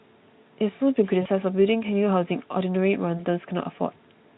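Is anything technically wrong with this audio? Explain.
Yes. VoIP packet loss concealed by the speech codec, at 1.21 to 1.28 s (about 40 ms missing) and 3.17 to 3.25 s (about 20 ms): the decoder extrapolates the last pitch and filter with falling gain, so the speech smears into a fading buzz or noise and stays weak briefly after recovery.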